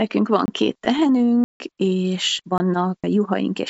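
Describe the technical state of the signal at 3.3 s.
At 3.3 s the speech is intact, carrying only the ordinary band-limiting of the WebRTC call path, with nothing above 8 kHz, as the G.722 codec leaves it.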